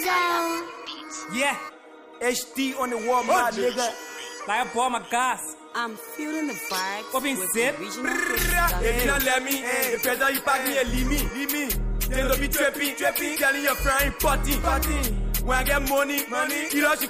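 No technical faults are audible anywhere in this recording.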